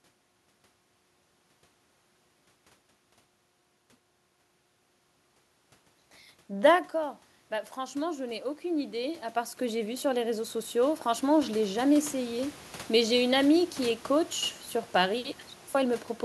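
Automatic gain rising, 6.48 to 12.57 s: the input dropped about 17 dB, so the gain control slowly added about 15 dB, swelling voice and room noise together.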